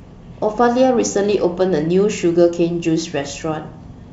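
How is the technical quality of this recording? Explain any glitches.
No glitches can be heard anywhere in the recording. The speech comes across as wideband telephone audio in G.722 at 64 kbit/s, clear up to about 7 kHz, with at most a faint hiss in the upper band.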